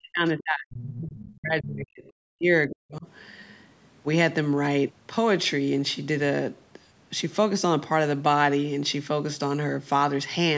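Right from the start, 0.0 to 2.51 s, you get speech suppressed in double talk: the talker's level keeps ducking, pieces dropping away for around two seconds in total, at worst by something like 40 dB. That's most likely the echo canceller hitting both ends talking at once, failing to tell the local voice from the loudspeaker echo, and clamping down on everything. The same thing happens again, shorter, from 2.68 to 3.07 s.

Inside that first stretch there's also the other side's voice leaking through, at 0.75 to 0.97 s and again at 1.18 to 1.37 s. These are short scraps of a second voice, sitting roughly 15 dB under the talker in the first one and nearer 20 dB under in the second. The likely cause is the far end coming out of the talker's loudspeaker and the canceller not scrubbing all of it out of the mic feed. The band tops out at 8 kHz, which is just the call's normal mic processing.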